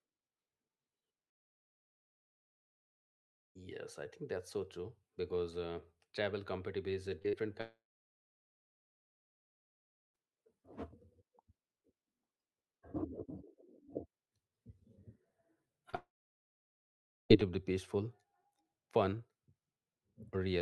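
From 1.29 to 3.57 s the speech cuts to near silence for about 2.3 s and resumes with that stretch missing, likely a long network dropout. Between 7.19 and 7.35 s, three brief smeared wobbles (7.19–7.22, 7.22–7.26 and 7.28–7.35 s) are short concealed packet loss, where the receiver patched 20–40 ms gaps by extending the preceding sound. From 7.61 to 10.16 s the audio goes quiet again, with about 2.4 s of silence and nothing recovered afterwards, likely another long network dropout. At 15.90–15.95 s a short smear from concealed packet loss leads straight into a third gap lasting until 17.31 s, about 1.2 s of it silent, likely a long network dropout as well.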